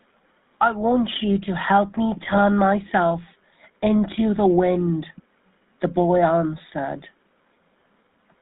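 GSM full-rate codec coding runs through the whole of this speech clip and is plainly audible. The decoder rebuilds the voice from a vocal-tract filter excited by regularly spaced pulses, giving a buzzy, gravelly roughness with nothing above 4 kHz, which fits GSM full rate at 13 kbps. GSM bit errors strike from 2.23 to 2.39 s. Corrupted filter, pitch and gain values reach the decoder, so for roughly a string of frames the spectrum warps and the level jumps, breaking the speech into squawks, pops and gargling.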